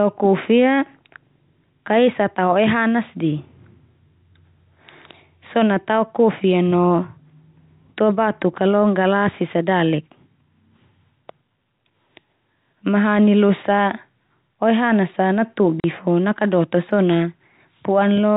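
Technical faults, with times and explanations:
15.80–15.84 s, packet loss filled with silence: a 40 ms hole, which fits two lost 20 ms packets, with hard edges; no repeated or smoothed sound, unlike concealment.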